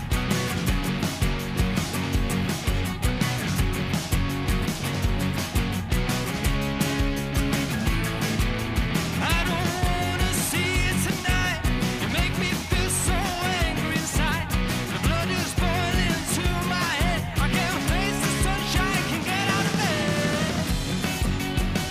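No technical faults can be heard anywhere in this recording.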